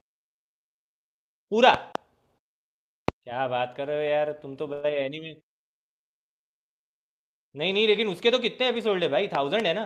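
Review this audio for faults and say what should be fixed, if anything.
Loud pops at 1.74–1.97 s (a pair), 3.08–3.11 s (a single pop) and 9.35–9.62 s (another pair). Each is a sharp thump over the speech, peaking about 15 dB above it, and the single one about 20 dB. The speech continues underneath. These are likely voltage steps from a connector, switch, static discharge or driver glitch. Secure cables, avoid switching during recording, and ground equipment properly.

A short stall from a late packet at 4.73–4.85 s. A packet arrived late and the jitter buffer emptied, so the receiver held the last sound for 97 ms, then resumed where it had stopped. Nothing is lost, but the delay grows by 97 ms. A deeper jitter buffer or a steadier network path would prevent it.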